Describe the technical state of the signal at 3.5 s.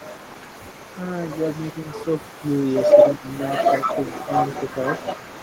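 At 3.5 s there is echo leak, running from 0 to 5.43 s: the far end's echo canceller likely let its loudspeaker output back into the microphone, so a delayed copy of the speech, about 146 ms late and only a few decibels quieter, trails the original.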